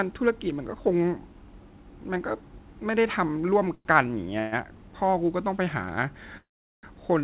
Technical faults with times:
3.75-3.87 call audio freeze
4.39-4.54 call audio freeze
6.37-6.85 call audio freeze

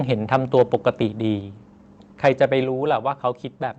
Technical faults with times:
2.64 microphone volume stepped down

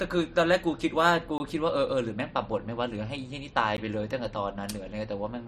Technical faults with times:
1.38-1.40 block of digital silence
3.77 block of digital silence

